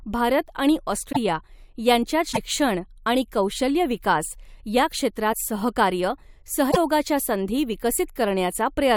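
Cut MP3 frames, likely a broken MP3 bit reservoir, leave following frames decoding foreign bytes: the speech jumps with brief chirps, noise bursts or short holes at 1.11–1.17, 2.31–2.38, 5.32–5.35 and 6.70–6.77 s.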